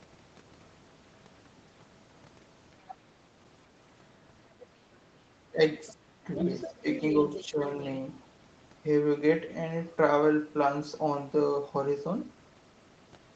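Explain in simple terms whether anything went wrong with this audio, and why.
Yes, two related things went wrong, and both were likely caused by the echo canceller on the talker's device.

Other side's voice leaking through: the device played the far end on a loudspeaker, and the echo canceller failed to scrub all of it from the microphone. You can hear a second voice in the background, very briefly and faintly at 2.89 to 2.95 s and 5.87 to 5.93 s, much more clearly for about a second from 6.36 to 7.44 s, and barely audible from 7.7 to 7.87 s.

Speech suppressed in double talk: when both people spoke at once, the echo canceller couldn't tell the talker apart from the loudspeaker echo, so it turned everything down. The talker's speech dips slightly at 5.52 to 5.6 s, then almost vanishes for about a third of a second from 5.93 to 6.27 s. Smaller dips follow at 6.82 to 6.86 s and 7.45 to 7.6 s, right around the loudest stretch of leaked voice.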